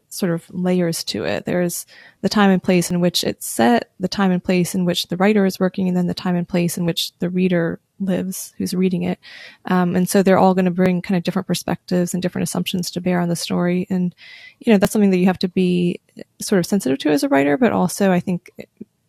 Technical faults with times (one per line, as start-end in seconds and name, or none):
2.90 overlap between stream segments
6.88 overlap between stream segments
10.86 overlap between stream segments
14.85 overlap between stream segments